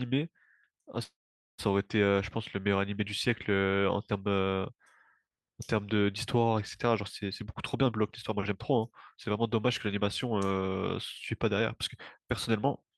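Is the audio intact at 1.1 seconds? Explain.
No. A call audio freeze runs from 1.03 to 1.60 s, likely because delayed packets drained the jitter buffer. The last sound is stretched into a brief fading buzz or hiss, then about 0.44 s of silence, before the speech resumes intact but 0.55 s later.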